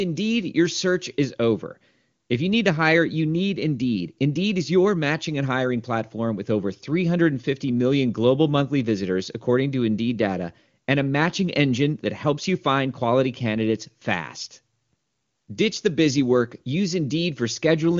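Nothing stood out on listening to this recording.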